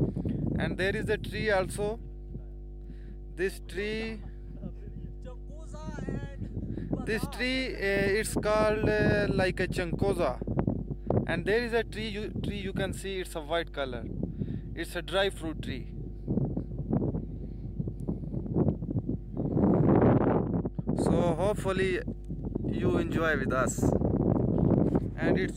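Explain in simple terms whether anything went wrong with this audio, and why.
Yes, something went wrong. A steady low buzz runs under the sound from the very start to the very end. This is mains hum. It comes from the power supply leaking into the audio, through a ground loop or a nearby transformer. Here it sits at 50 Hz, the frequency of the power line. It is fairly loud, not far below the sound itself. It never changes or stops, so it is easy to hear in quiet moments.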